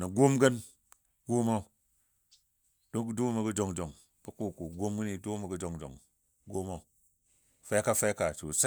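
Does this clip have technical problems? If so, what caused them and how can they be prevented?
Yes. At 5.16 to 5.18 s a corrupt frame was decoded: damaged bits in a single compressed frame were played back anyway, so misread gains or codes put energy at the wrong frequencies for that frame's duration. It is heard as a brief chirp or blip in the speech, fairly quiet, with an error peak of around -40 dBFS. On a spectrogram it appears as a short vertical smear or misplaced band that breaks from the surrounding harmonics. On a waveform it may be hard to spot at that level. Checksums or error detection on each frame, with concealment replacing any frame that fails, would stop damaged frames from reaching the output.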